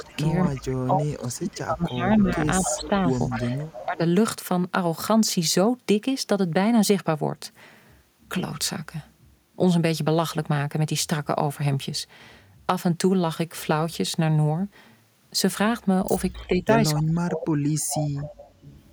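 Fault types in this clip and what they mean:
Echo leak: A far-end echo canceller likely let part of its loudspeaker pickup through, so a copy of the speech returns about 259 ms late, at 0 to 0.74 s, 1.49 to 3.86 s and 16.32 s to the end, roughly 10 to 15 dB below the direct speech.
Speech suppressed in double talk: With both sides talking, the canceller likely mistook the local talker for echo and turned everything down, so speech dips and breaks up during 0 to 4.01 s and 16.47 to 17.62 s, falling by up to about 25 dB and 35 dB.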